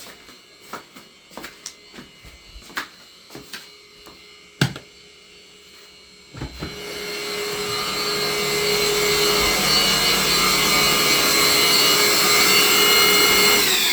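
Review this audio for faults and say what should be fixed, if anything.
Nothing to fix; no faults heard anywhere in the audio.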